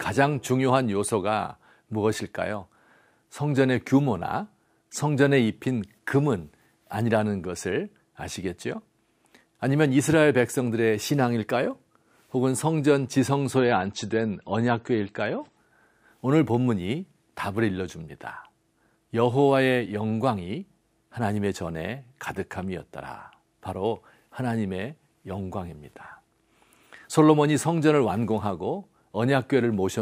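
From 13.57 to 15.57 s the adaptive stream drops to a lower bitrate: the treble vanishes above about 8.4 kHz and artefacts thicken, fitting a fall from roughly 128 to 34 kbit/s MP3. Unlike a dropout, there is no gap, only an abrupt two-second quality switch.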